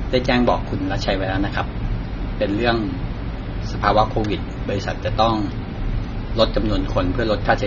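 From start to finish, the speech has likely been through AAC compression, fitting AAC-LC at about 24 kbps. The encoder drops everything above 6.9 kHz and quantises the rest coarsely, leaving plainly audible damage: a dull, smeared sound.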